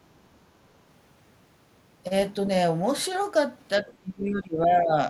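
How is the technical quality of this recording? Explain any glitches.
The recording is clean until near the end, where two echo-canceller glitches overlap. From 3.79 to 4.94 s there's speech suppressed in double talk: the talker dips, at worst by roughly 25 dB, for about a second, likely because the canceller ducked everything while both sides spoke. Around 3.8 to 3.93 s, the other side's voice leaks through as a faint scrap roughly 25 dB below the talker, likely loudspeaker echo the canceller didn't fully remove.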